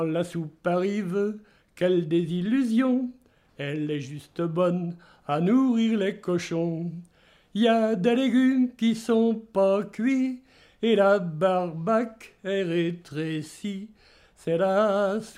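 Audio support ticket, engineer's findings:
No audible faults found in the signal path; level, continuity and timing hold steady throughout, with nothing to attribute to any component.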